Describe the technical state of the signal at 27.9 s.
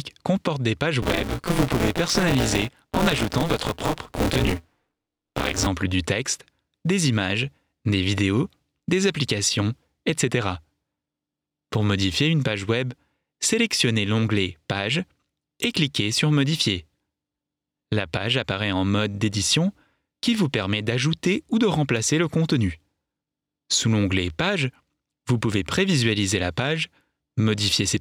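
At 27.9 s the signal is intact, with no technical fault at that moment.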